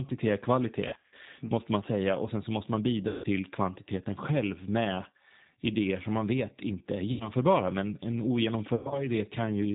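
The whole speech clip runs through the G.729 codec at 8 kbit/s: nothing above 4 kHz, with a rough, synthetic edge that comes from rebuilding speech, not from simple low-pass filtering. Packet loss concealed by the speech codec follows at 0.88–1.14 s after "är kvalitet", 3.08–3.26 s after "sen så måste man", 7.12–7.31 s after "man vet inte är", and 8.75–9.07 s. Each time the voice stretches into a fading buzz or coloured noise and recovers slowly, unlike the abrupt silence of a dropout.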